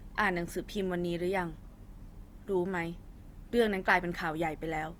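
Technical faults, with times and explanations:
Throughout, Opus compression: speech sounds grainy and rough rather than swirly, likely from CELT-mode coding near 24 kbps filling starved bands with noise instead of leaving gaps.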